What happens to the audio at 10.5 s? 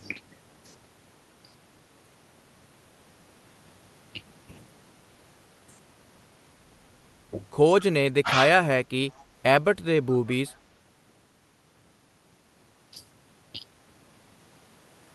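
An echo leak runs from 10.1 to 10.58 s. A faint copy of the speech returns about 150 ms late, well below the original. This is likely a loudspeaker echo the far end's canceller missed.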